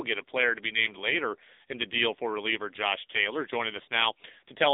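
AMR narrowband mobile codec damage runs through the whole speech clip. The voice has passed through the AMR-NB mobile speech coder, which rebuilds it from a vocal tract model driven by a pitch predictor and a few pulses per 5 ms frame. Nothing above 3.8 kHz survives, and the line band sits at roughly 250 Hz to 3.7 kHz. The coding damage is heavy, leaving a buzzy, synthetic voice that points to a low mode around 6.7 kbps.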